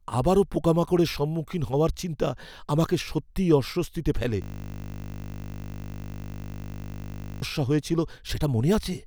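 At 4.42 s, just after "আমাকে সত্যিই অস্বস্তিতে ফেলে", the system freezes while the sound hardware keeps replaying its ring buffer, a system hang loop. One 20 ms slice repeats exactly until 7.42 s, producing a steady 50 Hz buzz and about three seconds of missing speech.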